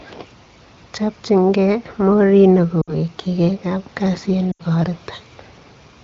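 A speech clip carried over AMR wideband (HD Voice). Lost AMR speech frames drop the sound to near silence at 2.81 to 2.94 s and 4.52 to 4.62 s. The decoder stretches the last good frame, which fits runs of three and four dropped frames.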